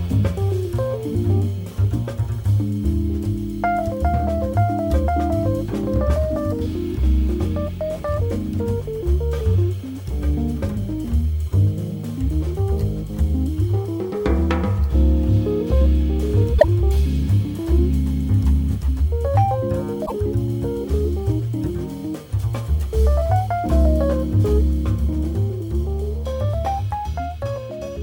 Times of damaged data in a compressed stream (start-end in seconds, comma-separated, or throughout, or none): 16.55-16.64, 20.02-20.12